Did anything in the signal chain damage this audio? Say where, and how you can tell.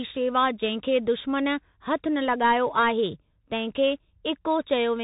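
Yes. Across the whole speech clip the sound is boxy and narrow, with nothing above about 3.8 kHz, s sounds that come out scratchy, and a fine granular hiss under the speech. The damage is at the codec stage: this is the Bluetooth CVSD headset codec. It encodes one bit per sample, just up or down, with an adapting step. Fast, loud high content outruns that step and distorts, which fits a 64 kbps CVSD link.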